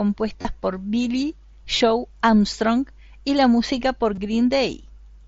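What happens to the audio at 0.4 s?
From 0.42 to 0.45 s the sound briefly turns into a buzzy, steady tone at full level, then warbles slightly as normal audio resumes. This is concealed Bluetooth headset packet loss: about 30 ms of data, consistent with roughly four lost packets, went missing between headset and phone over the mSBC link, and the receiver filled the gap by repeating the closest-matching recent stretch of waveform.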